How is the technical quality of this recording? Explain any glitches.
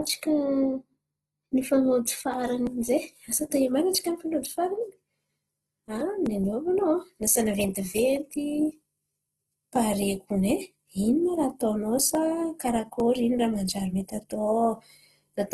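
The recording's quality is limited by plainly audible codec damage that runs through the whole clip.

Throughout, the speech sounds grainy and rough, with a noisy texture on voiced sounds. This is likely Opus compression in its CELT mode at a starved bitrate, consistent with roughly 16 kbps. Short of bits, the encoder fills bands with folded or noise-like content. On a spectrogram, the harmonics look speckled and smeared beneath a hard ceiling at about 12.3 kHz.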